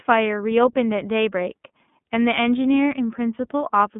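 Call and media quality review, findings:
iLBC codec, throughout: narrowband, nothing above 3.7 kHz; plainly rough, synthetic texture, unlike clean G.711 band-limiting; fits the 30 ms, 13.33 kbps mode.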